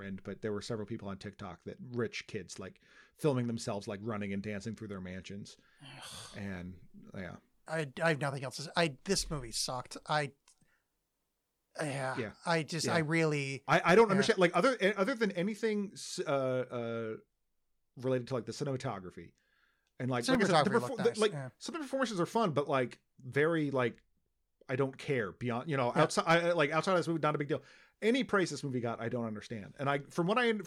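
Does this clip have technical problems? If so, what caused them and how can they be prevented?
Yes. At 20.35 s in this speech clip, between "and like" and "said the", there is a block of digital silence: the signal drops to silence for about 1.3 ms and then resumes. Because the waveform drops to silence and back with no fade, each edge produces a sharp discontinuity, heard as a single tick. A hole this short, which fits a 64-sample buffer, points to the audio program failing to fill one output buffer before the device needed it. To prevent it, enlarge the audio buffer or give the audio thread higher priority so processing always finishes before each deadline.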